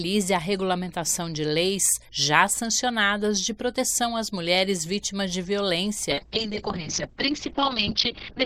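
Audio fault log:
6.11 s to end: call bitrate drop. The top end collapses from 20 kHz to 6 kHz and the sound turns coarse and muffled for the final 2.35 s, which fits the encoder being starved from roughly 96 kbps to about 8 kbps after the bandwidth estimate fell.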